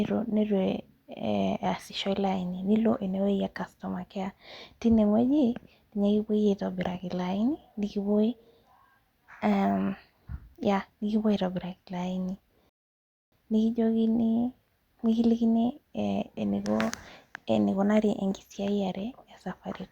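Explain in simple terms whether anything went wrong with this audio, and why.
At 12.69 s the speech drops to silence for about 0.63 s, a rebuffering stall: the player ran dry, waited for more audio, then resumed cleanly at "nikijokini nikilikini".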